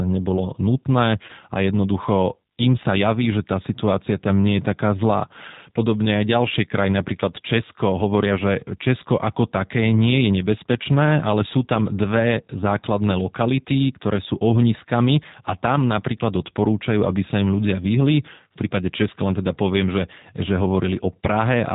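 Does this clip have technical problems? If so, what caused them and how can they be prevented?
Yes. Throughout, a G.729 codec makes the speech rough and synthetic, which fits 8 kbit/s; the spectrogram shows nothing above 4 kHz. Preventing it requires a wideband codec such as G.722 or Opus.

From 1.26 to 1.32 s, VoIP packet loss concealed by the speech codec replaces about 30 ms with a fading extrapolation, consistent with one lost packet. On the waveform this shows as a smoothly decaying segment. A jitter buffer with forward error correction or redundancy would prevent it.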